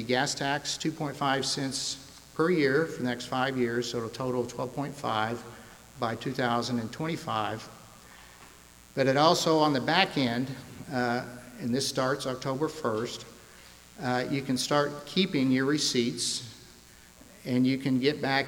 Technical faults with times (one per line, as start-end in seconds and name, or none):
0.00-18.47 mains buzz